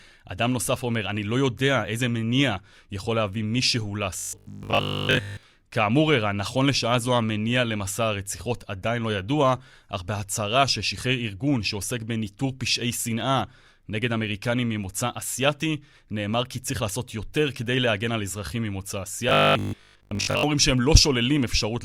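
At 4.19 to 5.43 s and 19.29 to 20.43 s, robotic sound from repeated short buffers turns speech into a rigid 50 Hz metallic buzz, likely a replayed 20 ms chunk, seen as evenly spaced spectrogram stripes.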